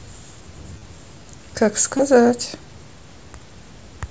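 Speech carried over a Bluetooth headset link using the mSBC codec, whose 8 kHz ceiling and light grain on loud sounds are part of the sound, shows concealed Bluetooth headset packet loss twice. From 0.74 to 0.82 s, about 45 ms of audio is missing, scattered across 75 ms with the longest run 30 ms. From 1.97 to 1.99 s, about 22 ms is missing, which fits a few 7.5 ms packets. Unlike a dropout, these gaps are not silent: the receiver fills them by repeating the last stretch of waveform. That gives a brief buzzy, level-held tone with a slight warble as the real audio resumes.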